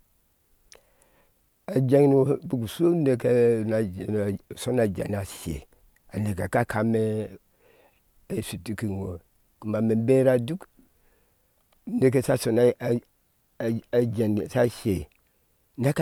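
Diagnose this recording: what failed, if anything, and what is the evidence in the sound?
Nothing in this speech recording points to a failure at any stage of the chain. The sound gives no evidence of a fault, so there is nothing to diagnose.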